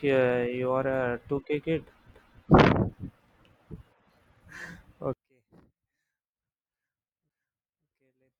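From 5.13 s to the end, the speech collapses by about 38 dB to a faint residue. This is likely one channel inverted, cancelling the centred signal in mono. Unlike a dropout or mute, a faint trace of the speech remains audible.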